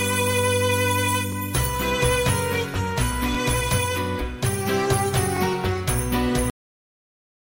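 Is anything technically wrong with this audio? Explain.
Yes. There are two faults.

A short stutter or click recurs every 2 s, at 1.32–1.35 s, 3.35–3.37 s and 5.37–5.39 s. This is overlapping chunks: the audio was handled in 2-second blocks, each starting about 21 ms before the previous one ended, so that slice plays twice at every join.

At 6.5 s the sound stops abruptly, mid-event, dropping straight into digital silence with no decay. This is a cut-off end: the final buffers never reached the output, so the last second of audio is simply missing rather than fading away.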